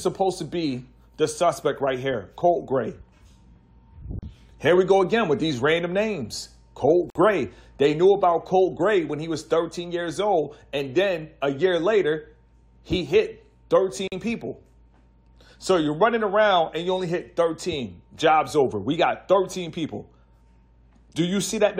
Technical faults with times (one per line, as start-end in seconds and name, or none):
4.19-4.23 gap at a join of encoded pieces
7.10-7.15 gap at a join of encoded pieces
14.08-14.12 gap at a join of encoded pieces